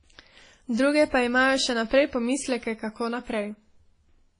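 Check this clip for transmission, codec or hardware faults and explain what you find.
One fault is present across the whole clip. Throughout, the speech sounds washy and ringing, with breathing hiss and nothing above 10.1 kHz. This is likely WMA compression, its long transform blocks smearing quantisation noise, consistent with a bitrate around 24 kbps.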